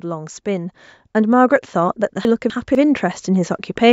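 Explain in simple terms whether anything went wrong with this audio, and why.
The speech gets steadily louder from about 0.05 s right to the end, with the background rising along with it. This is automatic gain rising: the system decided the input was too quiet and kept turning its volume up gradually rather than all at once.

Between 2.25 s and 2.75 s the speech briefly sounds jumbled. These are chunks out of order: two quarter-second pieces swapped places, so one played after the piece it should have come before. Nothing is missing, only the order.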